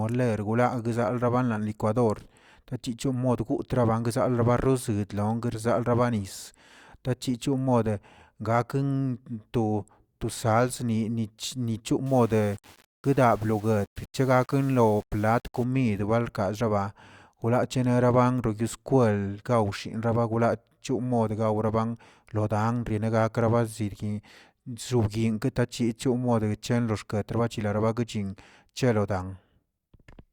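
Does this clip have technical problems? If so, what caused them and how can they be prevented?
Yes. From 12.06 s to 15.64 s the speech turns grainy and rasping, and the grit rises and falls with the sound itself, with the quietest stretches sputtering or dropping out. The likely cause is low bit depth without dither, roughly 7 bits rounded to the nearest step, leaving distortion around 30 dB below the signal. Unlike properly dithered reduction, which leaves a steady, even hiss, this error tracks the speech and vanishes in silence. Keep at least 16 bits and apply dither whenever word length is reduced.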